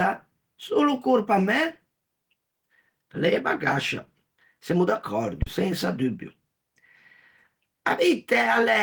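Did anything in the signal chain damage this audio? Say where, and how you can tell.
Yes, at the analogue input: a phantom power thump at 5.42 to 5.80 s, a supply step passing through the coupling capacitors and fading within 85 ms, without a plosive's breath.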